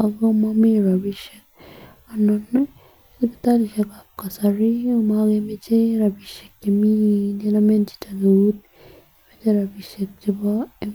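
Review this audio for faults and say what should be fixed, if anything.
No faults; nothing to fix.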